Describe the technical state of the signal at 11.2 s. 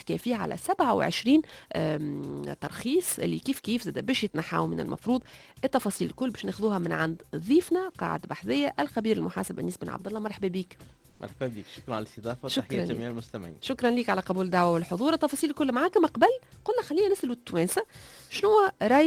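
Right at 11.2 s the background has just been replaced by comfort noise, from 11.09 to 11.19 s. For about 100 ms the real ambience, already about 30 dB below the loud parts, gives way to a flat, featureless hiss roughly 11 dB quieter. The likely cause is Opus discontinuous transmission: the sender stopped transmitting during a quiet stretch, and the receiver filled the gap with synthetic noise loosely matched to the background's spectrum.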